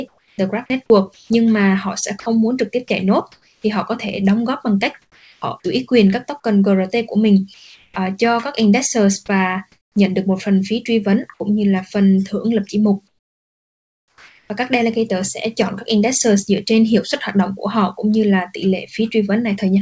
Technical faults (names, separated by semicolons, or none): comfort noise in place of the background; sound dropped by the voice detector; sound chopped by the voice detector